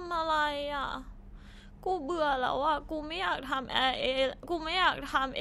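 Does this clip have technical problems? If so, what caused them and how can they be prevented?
Yes: clock slip clicks tick about every 30 ms from 0.11 to 5.39 s, likely from two unsynchronised clocks roughly 1000 ppm apart, showing as evenly spaced thin vertical spectrogram lines. Lock both devices to one word clock or use asynchronous sample-rate conversion.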